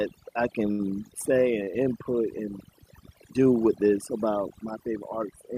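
Overdone noise removal runs through the whole clip. A noise reduction stage set far too aggressively has pulled down every frequency band it judged close to the noise floor, taking the quieter parts of the speech with it. Between phrases the background collapses into near silence, sprinkled with twinkling specks. Unlike a low-bitrate codec, the artefacts cling to the quiet moments and the noise floor rather than smearing the loud syllables.

At 0.71 s a short stall from a late packet holds the sound for about 78 ms, until 0.81 s, and a second stall at 1.64 s lasts about 31 ms. Each time the jitter buffer ran dry, so the receiver stretched the last sound until the packet arrived and then resumed where it left off. Nothing is lost; what is heard is a sound held too long, with a faint buzz or dip, and the following audio arrives later by the stretched amount. That sets it apart from packet loss, where a piece goes missing and is patched over.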